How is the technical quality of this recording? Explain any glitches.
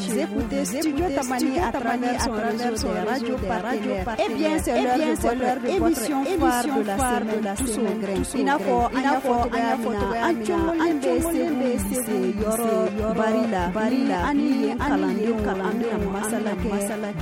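The recording has one clear problem that runs from start to finish: a doubled audio track. Throughout, every sound returns about half a second later at roughly the same loudness, a full-band copy with no decay or room colour, likely from a second, slower capture path mixed back in. On a waveform each transient appears twice; a spectrogram shows every event duplicated at a fixed offset.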